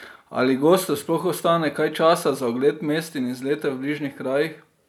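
Speech with no audible faults.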